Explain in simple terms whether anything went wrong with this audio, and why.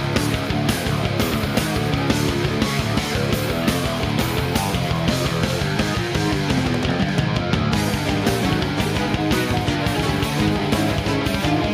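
Nothing went wrong here: the signal stays steady and intact the whole way, with no dropouts, glitches or distortion to be heard.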